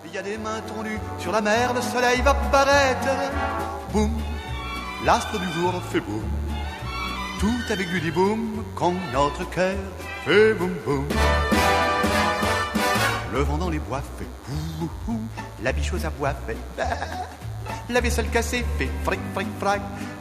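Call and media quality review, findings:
DECT cordless phone buzz throughout: thin steady buzz at 100 Hz, rich in harmonics, roughly 25 dB below signal. Nearby DECT handset or base bursting every 10 ms, rectified in the audio front end.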